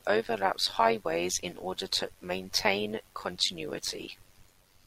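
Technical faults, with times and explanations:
Throughout, overlap-add ripple: the speech carries a metallic buzz near 100 Hz, with extra tones around each note, and the level swinging by about 11 dB. It comes from windowed frames rejoined with overlaps that do not sum to constant gain, so loudness dips once per frame.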